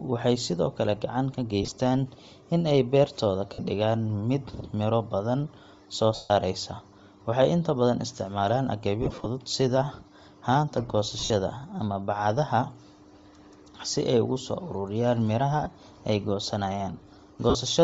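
Throughout the speech, a breathy, grainy edge sits on the upper band, likely from Bluetooth LC3 compression at a rate that fits 32 kbps. On a spectrogram the high frequencies appear as patchy noise-filled blocks instead of clean harmonic detail.

Lost LE Audio frames occur at 1.62–1.72, 3.53–3.59, 6.15–6.31, 9.02–9.26 after "inta badan isticmaalaan", 11.19–11.30 before "ama bacadaha", 15.63–15.66 after "ay ugu soo ururiyaan", and 17.50–17.55 s. The decoder repeats the last spectrum with scrambled phase, so each gap sounds like a brief noisy smear. The longest, 150 ms at 6.15 s, fades toward silence. A waveform shows a decaying noisy envelope, and a spectrogram shows harmonics dissolving into a blur.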